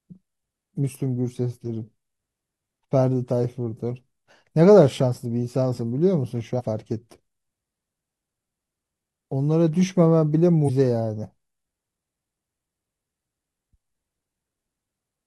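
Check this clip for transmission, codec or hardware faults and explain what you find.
There are three spots where compressed frames are skipped. At 6.55–6.62 s, 8.78 s and 10.64–10.70 s the speech jumps forward, losing about 150, 500 and 200 ms of audio, which fits several whole 46.4 ms frames going missing or being rejected by the decoder each time. At each join the speech just lurches ahead.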